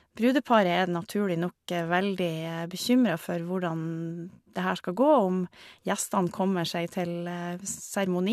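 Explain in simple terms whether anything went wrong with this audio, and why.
Nothing went wrong that I could hear: listening through the speech, no problem stood out at any point.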